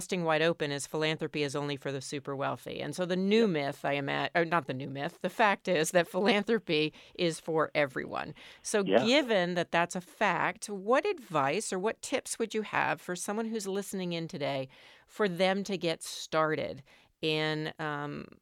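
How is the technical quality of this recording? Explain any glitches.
The technical quality of this recording is sound, with no glitches to explain.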